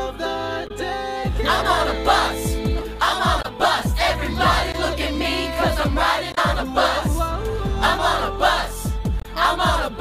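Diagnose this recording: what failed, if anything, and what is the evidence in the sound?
The codec stage failed: damaged data in a compressed stream. Brief glitches occur at 0.67–0.71, 3.41–3.45, 6.32–6.38 and 9.20–9.25 s, each about 40–60 ms. At each point the decoder misread corrupted frames, lost sync and resumed at the next valid frame header.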